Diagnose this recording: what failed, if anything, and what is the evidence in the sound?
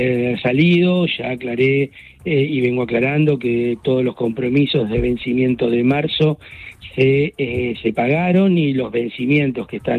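Nothing failed; no fault is audible anywhere.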